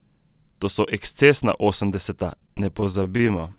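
Repeated stalls (stutter) run from 2.32 s, just after "so ekscesna osemdeseta", to the end. Packets arrived late, so the jitter buffer repeatedly ran dry and the receiver stretched the last sound through over twenty brief gaps of up to 25 ms, about 275 ms in all. The audio drags and stutters in this narrowband call, which has nothing above 4 kHz.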